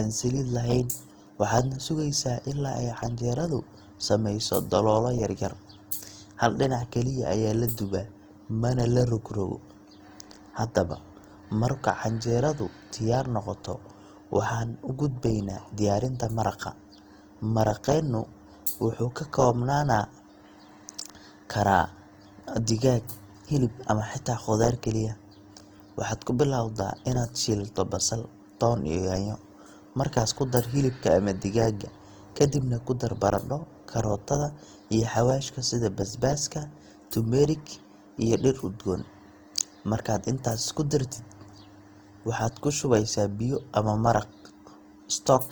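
Speech, with one fault throughout. It is low-bitrate audio saved at a high bitrate. The MP3 has nothing above 20.2 kHz, yet the artefacts of a heavy first encoding remain. The likely source is a low-bitrate Opus file, around 24 kbit/s.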